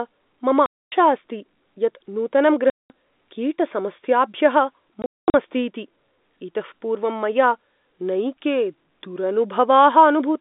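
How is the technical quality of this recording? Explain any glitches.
The recording has three dropouts from packet loss filled with silence, heard over a telephone-band line (G.711, roughly 200 Hz to 3.7 kHz) at 0.66–0.92 s (just before "अस्ति यत्"), 2.7–2.9 s and 5.02–5.34 s. The network lost packets and the receiver inserted silence in their place, so the speech cuts out abruptly with hard edges. The gap lengths fit 20 ms packets, and the third dropout is broken up rather than one continuous hole.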